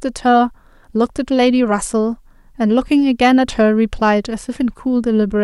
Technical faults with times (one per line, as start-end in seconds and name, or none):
none